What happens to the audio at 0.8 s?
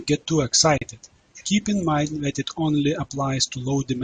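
At 0.78 s the speech drops into a brief gap of about 38 ms, with smeared edges, before resuming exactly where it stopped at 0.82 s. This is a gap at a join of encoded pieces: separately encoded segments were joined untrimmed, keeping the encoder delay and final-frame padding.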